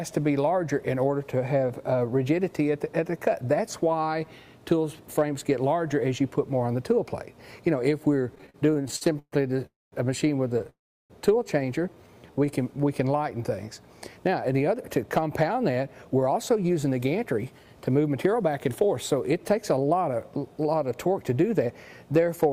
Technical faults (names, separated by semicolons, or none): repeated stalls (stutter); call audio freeze; jitter buffer slow-down; jitter buffer speed-up